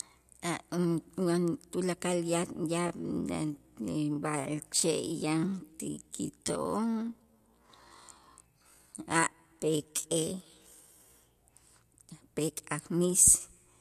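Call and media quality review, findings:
Time-stretched section, 2.76 to 11.16 s. Speech pace drops abruptly to about 0.57x while pitch holds. Speech drags. Likely a time-stretch stage padding audio by repeating short pieces to fill length. Pace returns to normal after 11.16 s.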